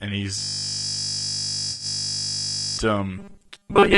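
Low-delay AAC compression runs through the whole of this speech clip, most likely AAC-ELD at a bitrate around 32 kbps. Its short, low-delay frames split the voice's pitch harmonics poorly. With so few bits to share, the voice comes across plainly rough and grainy, with noise filling the gaps between harmonics and a top band that sounds thinned or synthetic. A system hang loop runs from 0.39 s to 2.78 s. Playback stalls while the output keeps replaying the same 20 ms stretch of audio, roughly 120 times over. Because the repeated piece is so short, the sound collapses into a steady buzz at 50 Hz, the loop rate, instead of a stutter. AAC frame loss with concealment falls inside that span, from 1.71 s to 1.85 s. About 80 ms of coded audio goes missing, which fits four lost frames. The decoder fills the hole from the last good spectrum, so the patch sounds smeared and noisy, with a phasey quality. 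Robotic sound from repeated short buffers sets in at 3.18 s and lasts to the end. Fresh audio likely arrives too rarely, and the gaps are filled by re-playing the last 5 ms over and over, while most of the real audio is skipped. That fixed repeat stamps a rigid, metallic 200 Hz buzz onto the voice, which only loosely follows the original syllables.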